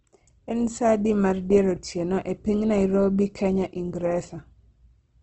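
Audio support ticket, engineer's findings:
Opus compression across the whole speech clip. Grainy, rough texture, plainly audible. Nothing above about 8.3 kHz. Likely the Opus encoder in CELT music mode. Bands refilled with folded or noise content, not dropped. Sound fits a 16 kbps wideband setting.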